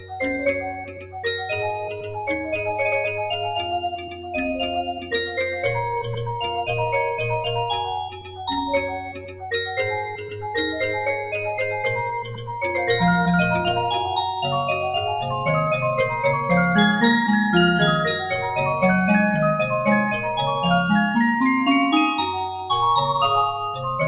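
Throughout the clip the sound pumps and thins, with level swinging by around 10 dB as sustained parts sink and sharp onsets push through. A noise suppressor designed for speech was left running on this material. It treats steady tones, ambience and reverb as noise, so held sounds and tails get pulled down while attacks are let through. Everything passes through a narrow call path with nothing above 4 kHz, consistent with a G.711 mu-law codec at 64 kbps.

On top of that general pumping, specific stretches are turned down further. These are sounds cut by the noise suppressor, which judged them to be noise and turned them down harder than the rest, clipping their level or decay. From 0.00 to 1.25 s the sound sinks by up to about 15 dB over roughly 0.7 s. It dips by about 7 dB between 1.90 and 2.18 s, by about 9 dB from 3.94 to 4.34 s, and again by about 9 dB from 4.88 to 5.12 s. The longest cut runs from 8.07 to 9.52 s, about a second in all, reaching about 13 dB. 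Shorter losses follow at 10.07 to 10.46 s (about 8 dB) and 12.23 to 12.57 s (about 9 dB).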